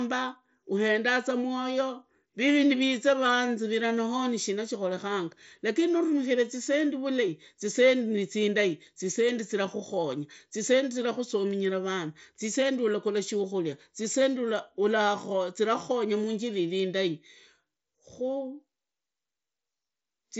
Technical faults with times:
none

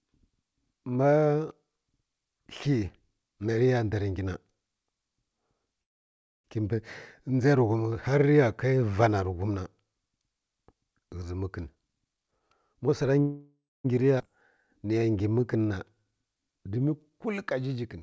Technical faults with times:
5.82-6.46 call audio freeze
11.63-13.14 jitter buffer speed-up
13.21-13.86 call audio freeze
14.18-14.22 skip ahead
14.36-17.11 jitter buffer slow-down

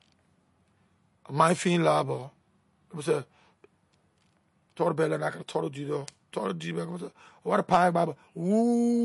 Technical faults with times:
0.00-9.04 MP3 compression

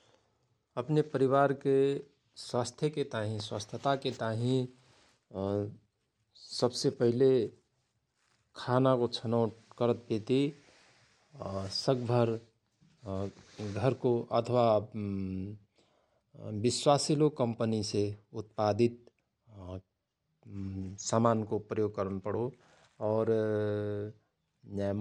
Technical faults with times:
none

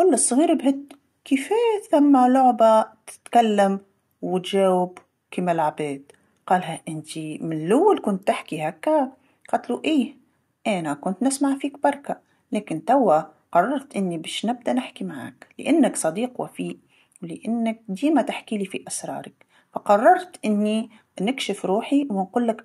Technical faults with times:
none

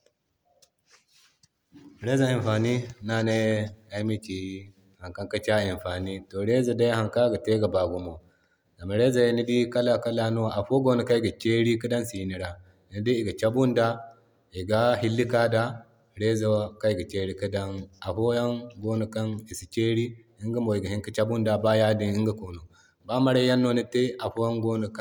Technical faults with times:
none

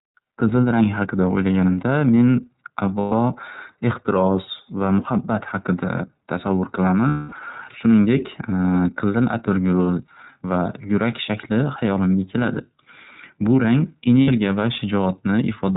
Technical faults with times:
0.00-15.77 iLBC codec
2.99-3.13 lost iLBC frames
7.07-7.33 lost iLBC frames
14.22-14.29 lost iLBC frames

